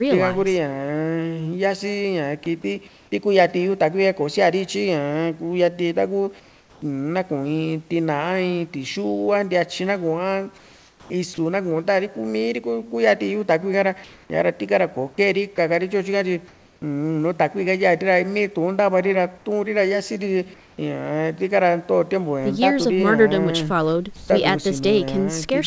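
Speech over a call link with no content above 8 kHz, as a G.722 wideband path would give, has two faults. At 2.44 s a brief bit of sound is swallowed into steady hiss, likely a sound dropped by the voice detector, which mistook the sound for background and stopped sending. In the pauses at 2.44–3.12, 6.40–6.82, 10.58–11.10, 14.04–14.30, 16.48–16.82, 19.38–20.78 and 24.16–24.30 s, the textured room background turns flat and featureless, at times about 2 to 7 dB quieter. This is likely comfort noise in place of the background: the sender stopped transmitting in silence and the receiver synthesised noise roughly shaped like the background.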